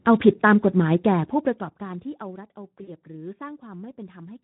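From the first moment to the end, the speech carries the signature of the Speex codec: a hoarse, grainy, noisy texture, because the CELP excitation is starved of bits at a rate that fits roughly 11 kbps. Consonants smear and voiced sounds lose their clean harmonic ring. On a spectrogram, harmonics look blurred and noisy between formants, and any energy above 4 kHz appears as a diffuse, shaped wash rather than detailed structure.

At 2.83 s, running to 2.90 s, there is VoIP packet loss concealed by the speech codec. Around 40 ms of audio, consistent with two lost frames, was never received, so the decoder kept repeating its last pitch and filter settings while lowering the gain. The result is a brief, stretched sound that fades, and the voice stays weak or distorted for a short while as real audio resumes. On a waveform this shows as a short, decaying stretch; a spectrogram shows a frozen, fading spectrum.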